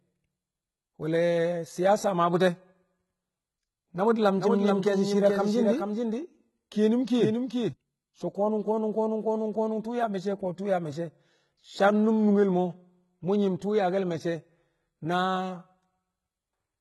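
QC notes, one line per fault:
throughout, HE-AAC compression: heavy codec damage, with nothing above 11.8 kHz and treble that is rebuilt rather than real, likely from HE-AAC at a rate fitting about 16 kbps. Spectral band replication copies lower bands upward, so harmonics misalign and s sounds turn gritty or metallic.
4.37 to 7.73 s, doubled audio track: a second full-band copy trails about 400 ms behind at about 5 dB quieter, with no decay or room colour, and it starts and stops abruptly. This is likely the same audio captured twice through a slower path, or an edit holding two copies out of step.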